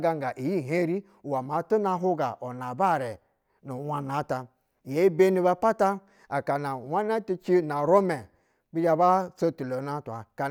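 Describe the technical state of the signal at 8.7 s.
At 8.7 s the signal is intact, with no audible fault at that moment.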